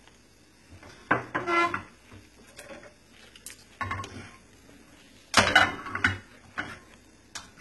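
From start to finish the upper register sounds bright but false: the treble has a gritty, metallic sheen, and the highs do not sit naturally on the body of the sound beneath them. The damage is heavy and constant. This is likely HE-AAC compression at a very low bitrate, around 16 kbps. Only the lower spectrum is truly coded, and the top end is synthesised by copying lower bands upward, so its harmonics fail to line up.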